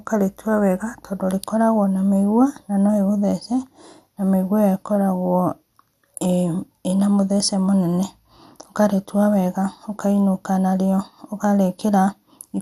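From start to finish the speech carries plainly audible damage of the kind left by MP2 compression, likely at a low bitrate, with the character pointing to something around 80 kbps. The encoder divides the signal into 32 sub-bands and runs short of bits, so upper bands drop out and return from moment to moment while the surviving bands are coarsely quantised. The result is a dull top end with a gurgling, granular roughness under the voice.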